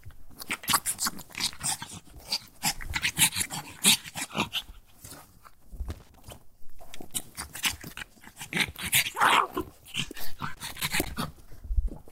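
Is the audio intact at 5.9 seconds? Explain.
No. From 5.90 to 6.24 s there is loose connector crackle: a worn or dirty contact keeps making and breaking, chopping the signal into an irregular burst of scratching. Unlike evenly spaced digital clicks or clean dropouts, the interruptions are ragged and unpredictable.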